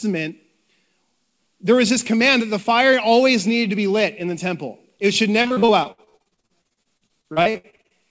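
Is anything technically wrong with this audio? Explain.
Yes. From 5.42 to 7.93 s, just after "the temple it should", the speech shows repeated packet loss (robotic sound). Around thirty short holes, the longest about 65 ms, are each patched by stretching the preceding sound, and that patching makes up roughly 38% of the stretch. The result is choppy speech with pieces missing. Unlike a single dropout, the holes keep recurring across the stretch. The call path's empty band above 8 kHz fits a wideband codec such as G.722.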